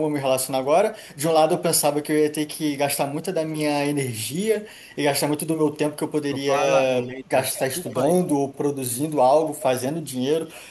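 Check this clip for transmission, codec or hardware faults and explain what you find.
Two kinds of fault are audible, both pointing to acoustic echo cancellation on a call.

Speech suppressed in double talk appears at 6.49 to 6.54 s and again at 7.07 to 7.25 s. The speech briefly dips by about 5 dB. The two dips are short, roughly 50 ms and 200 ms. They likely happen because both sides talk at once. The echo canceller then cannot tell near speech from loudspeaker echo, so it attenuates everything.

Echo leak is heard at 7.0 to 7.06 s, 7.56 to 7.61 s, 7.84 to 8.03 s and 10.46 to 10.52 s. Each is a faint delayed copy of the speech, trailing by about 245 ms. The copies sit well below the speech, roughly 15 to 30 dB down. They come in brief scraps, not continuous echo. A far-end loudspeaker is likely feeding its microphone, and its echo canceller lets some of that residue back through.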